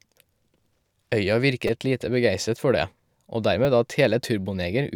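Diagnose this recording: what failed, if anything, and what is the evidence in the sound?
Repeated buffer at 1.68 s, just before "lite begeistret for det", and again at 3.65 s, a driver or buffer stage fault. Fresh audio arrived late, so the last block replayed with hard joins, several times at 1.68 s and once at 3.65 s. The resulting click-like buzz fits a 5 ms buffer.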